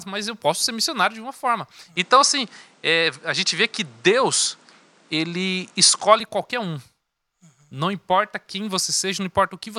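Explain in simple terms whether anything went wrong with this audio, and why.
Input switched to a poorer device from 1.96 to 6.20 s: the speech turns duller, shifts a little in level and gains faint background noise, likely because recording jumped to a weaker microphone.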